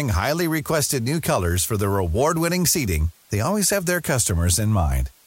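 Throughout, low bit depth with dither, consistent with 8 bits, turns rounding error into a constant, even hiss roughly 35 dB under the speech.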